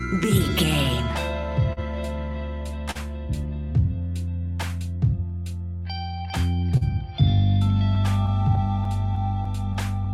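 Clock drift between sender and receiver runs through the whole clip. The sender's clock is running slow by roughly 3 percent, so the receiver's jitter buffer keeps draining and must stretch or repeat short pieces. The result is small timing hiccups that recur at uneven intervals throughout.

A short stall from a late packet occurs at 1.73 to 1.79 s and again at 2.91 to 2.97 s. Each time the packet arrived late and the buffer ran empty. The receiver held the last sound for about 40 ms, then resumed where it left off. Nothing is lost, but the sound briefly hangs with a slight buzz or dip.

Scattered short gaps follow from 4.39 to 6.83 s. Around four packets went missing or arrived late, and each hole was patched by extending the preceding sound. About 70 ms is filled in total, and the longest patch is around 40 ms. This produces occasional brief smears and hiccups.

A second stretch of scattered short gaps runs from 7.95 to 10.08 s. 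Here there are about seven tiny concealed holes, none longer than about 10 ms, adding up to around 100 ms. They come through as quick ticks and smears.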